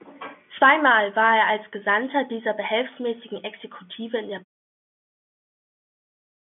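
Nothing stood out on listening to this telephone-band speech, which fades out smoothly toward the end.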